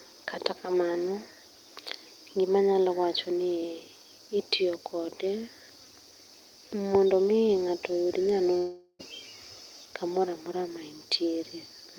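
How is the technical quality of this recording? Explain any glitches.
There is one glitch in this speech recording. From 8.57 to 9.01 s there is a long network dropout. The last sound stretches into a fading buzz or hiss for about 0.42 s, followed by a brief silence. The likely cause is that audio stopped arriving, so the receiver filled the gap. That part of the speech never returns.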